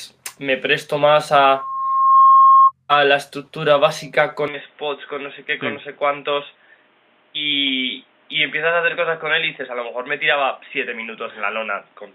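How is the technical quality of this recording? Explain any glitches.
The recording has two clear faults. The first is brief. The second lasts to the end.

From 1.36 s to 2.72 s there is loudspeaker feedback squeal. A microphone is hearing the loudspeaker it drives. At 1.1 kHz the loop gain passes one, so that tone feeds on itself. It swells from nothing in well under a second. It then rings about 10 dB louder than the rest of the sound. It stops at 2.72 s.

From 4.48 s to the end the input was likely switched to a poorer device. There is no gap at the change. The sound simply turns dull and boxy. Nothing reaches above 3.8 kHz, which fits a narrowband headset or cheaper microphone. The level drops by roughly 5 dB. A faint new background noise also appears, around 35 dB below the sound.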